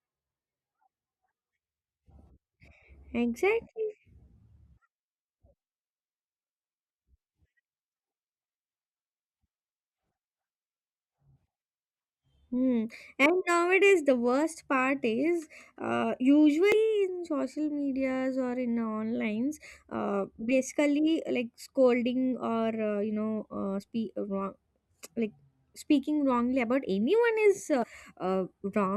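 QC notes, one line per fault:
16.72–16.74 s, 21.30 s, 27.82–27.84 s: damaged data in a compressed stream. Three brief glitches, between "is uh" and "in social medias or", between "uh basically" and "scolding or", and near the end. Corrupted bytes make the decoder misread frames and lose sync until it finds the next header. On a spectrogram, each shows as a narrow vertical disruption, and the waveform shows a short burst or discontinuity.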